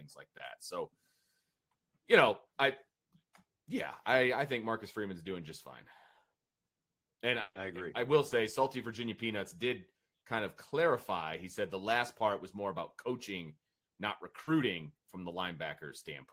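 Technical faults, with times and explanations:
0.37–0.41 s, 8.29–8.33 s and 14.43–14.49 s: short concealed packet loss. Each is a brief hole in the stream, 20 ms at the first two and 40 ms at the third. The second comes right after "agree I will". The third falls between "more about coaching not" and "from the". The receiver bridged each hole by extending the preceding sound, then blended back into real audio. The result is a quick smear or wobble rather than a gap.
7.41–7.57 s: burst of packet loss. About 140 ms of audio never arrived, just before "agree I will". The receiver kept the last sound going and faded it out, and the final 40 ms or so drop to silence. The result is a held, dying buzz or hiss, then a gap. The speech resumes further on, with the stretch in between simply missing.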